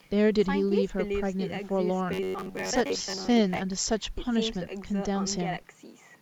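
From 2.13 s to 3.59 s the speech turns into robotic sound from repeated short buffers: a rigid, metallic buzz at about 93.8 Hz that still loosely tracks the speech. The likely cause is audio arriving too slowly, so playback keeps looping the last segment of roughly 10.7 ms, one period of the buzz, to cover the gaps. Repeats fill most of that stretch, and the real audio in those gaps is lost.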